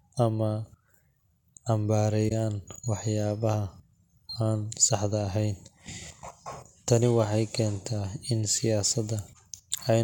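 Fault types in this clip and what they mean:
Corrupt frame concealed: from 2.28 to 2.32 s, a span of about 34 ms, bits in the AAC stream were damaged, the decoder detected the bad data, and it filled the gap itself rather than decoding garbage, with either silence or a scrambled reuse of the preceding good spectrum. The gap's length fits a few lost frames.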